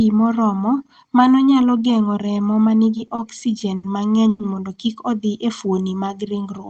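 From 2.97 to 3.84 s, just after "remo ma", the speech shows repeated stalls (stutter): packets arrived too slowly, the jitter buffer ran dry six times, and the receiver stretched the last sound across about 170 ms in total. The longest hold is 70 ms. Nothing is lost, but the phrase drags and stutters.

At 4.29 to 4.40 s, right before "mondo kik", a call audio freeze holds the last sound for about 100 ms as a buzz or hiss that fades before speech resumes intact. The likely cause is a sudden 100 ms rise in network delay. The band-limiting to 8 kHz fits an Opus call path at around 24 kbps.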